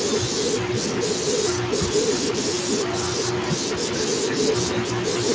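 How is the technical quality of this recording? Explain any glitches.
The technical quality of this recording is good, with no glitches to explain.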